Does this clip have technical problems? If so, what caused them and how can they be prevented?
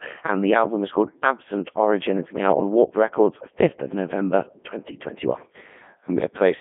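Yes. A Codec 2 vocoder affects the whole clip: the speech sounds robotic and buzzy, with heavy damage throughout. The decoder does not carry the original waveform; it rebuilds the voice from sine waves using only pitch, voicing, energy and a coarse spectral envelope, so natural texture is lost. The audio sits in a narrow band of roughly 150 Hz to 3.6 kHz with nothing above 3.7 kHz, which fits Codec 2's highest-rate 3.2 kbit/s mode. To prevent this, record or route the speech through a full-band waveform codec, such as Opus at an adequate bitrate, instead of a low-rate radio vocoder.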